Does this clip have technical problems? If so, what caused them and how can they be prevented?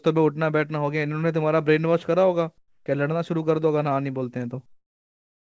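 Yes. From 2.58 to 2.86 s the real background gives way to a steady, featureless hiss about 5 dB quieter. That is likely comfort noise in place of the background: the sender's discontinuous transmission paused between phrases and the receiver filled the 280 ms with synthetic noise. Unlike a dropout or noise gate, the gap never falls silent. Turning off DTX on the sending side prevents it.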